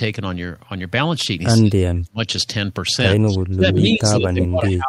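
Speech suppressed in double talk hits this speech recording at 1.6 to 2.2 s and again from 3.23 s to the end, with the voice dropping by roughly 35 dB and then roughly 25 dB, likely because an echo canceller turned down the local talker while the far side spoke. An echo leak at 4.41 to 4.47 s brings back a copy of the voice 152 ms late, only a little quieter than the speech, likely from loudspeaker pickup that the canceller failed to remove.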